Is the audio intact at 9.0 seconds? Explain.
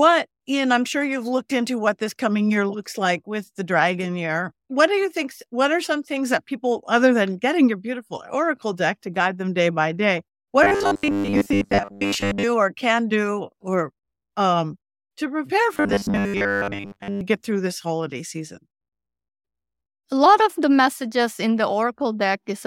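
Yes, the speech at 9.0 seconds is intact, with no dropout, click, distortion or other fault audible at that moment.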